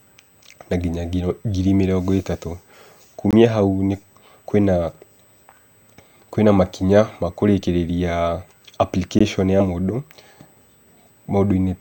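A USB whine runs under the whole speech clip: a steady, fixed-pitch tone at 8 kHz, with its strongest component at the 16 kHz harmonic, sitting about 40 dB below the speech. The 8 kHz rate matches the 125 microsecond microframe of a high-speed USB bus. The periodic current draw of that bus is leaking into the analogue path through the shared power or ground. Because the tone is constant, it is most audible in pauses.

From 2.35 to 2.38 s, compressed frames are skipped. The decoder drops roughly two of its 10 ms frames, so the audio jumps forward by about 20 ms.

From 3.31 to 3.33 s comes the first block of digital silence, lasting 21.33 ms. Its length fits a 1024-sample buffer at 48 kHz, which points to an output buffer that was not filled in time and was sent as zeros. The signal drops straight to silence and back with no fade, and the result is heard as a brief hole.

A second block of digital silence at 9.19 s lasts 16 ms. 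It has the same abrupt edges and produces a short gap.

At 9.60 s compressed frames are skipped again. Roughly three 10 ms frames are missing, so the audio jumps ahead by about 30 ms.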